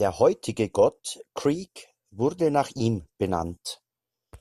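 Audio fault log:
No faults heard anywhere in the speech; nothing to log.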